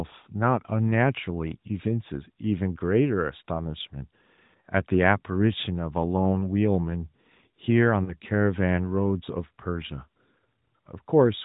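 Around 8.04 to 8.16 s there's a burst of lost AMR speech frames: about 40 ms went missing, which fits two dropped 20 ms frames. The decoder stretches the last good sound with falling level, giving a smeared dip before the voice comes back briefly rough, all within the codec's muffled, sub-4 kHz narrowband sound.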